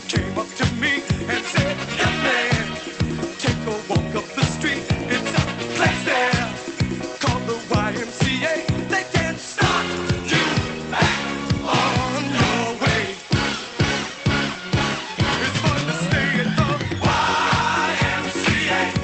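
No technical faults can be heard in this audio.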